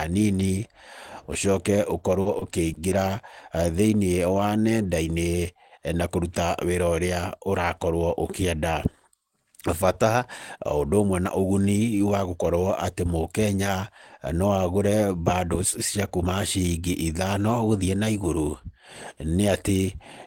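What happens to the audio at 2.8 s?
At 2.8 s the speech is inside a stretch of repeated packet loss (robotic sound), running from about 2.21 to 2.93 s. Several brief dropouts, the longest about 40 ms, are patched by extending the preceding sound, so the speech turns choppy with pieces missing.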